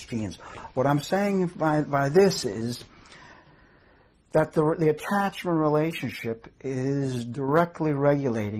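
The audio has one fault, a brief one channel drops out event from 7.35 to 7.49 s: for about 130 ms the sound falls abruptly by about 6 dB and then snaps back, likely because one stereo channel lost signal before the mono sum. The waveform shows a sudden step down in amplitude, and a spectrogram shows a uniform darkening band across all frequencies.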